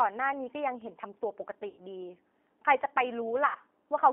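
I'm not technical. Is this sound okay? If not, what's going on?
No, not quite. The whole clip has been squeezed through the G.729 codec, a phone-call format that rebuilds the speech from a rough model of the voice instead of keeping the real sound. Everything below about 250 Hz and above 3.5 kHz is gone, so it sounds thin and boxy, like a phone line, with a slightly rough, synthetic edge that's easy to hear right through.

There are also two short dropouts, at about 1.68 to 1.79 s and 3.46 to 3.58 s. These are VoIP packet loss concealed by the speech codec. Roughly 90 ms of audio went missing each time, and the decoder filled the hole by stretching out the last bit of voice it had. That comes across as a brief buzzy or smeared tone that fades, with the voice staying a little weak just after.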